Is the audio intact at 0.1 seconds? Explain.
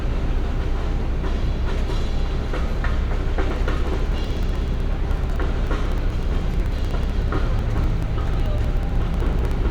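Yes, at 0.1 seconds the audio is intact, with no fault affecting the sound at that moment.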